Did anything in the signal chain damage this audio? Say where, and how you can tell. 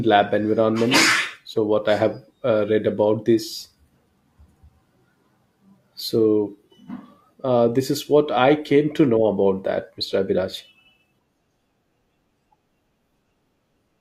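Yes. The damage happened at the network streaming stage, where an overlap between stream segments made the player trim audio that was never actually duplicated. About 40 ms of speech goes missing from 1.26 to 1.30 s and again from 13.27 to 13.31 s. At each spot the waveform jumps straight from one point to a later one, so it is heard as a small click or skip. The two events sit 12 s apart, which fits segment boundaries every 6 s.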